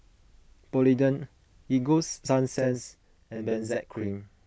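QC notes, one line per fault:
2.59 s to the end, channel delay (doubling): the speech suddenly thickens into a doubled sound, with a second copy trailing the first by about 40 ms at equal level, heard separately as a short slap. One channel has started arriving a buffer's worth late, and when the two sides are folded to mono the late copy sits on top of the on-time one instead of cancelling or blending.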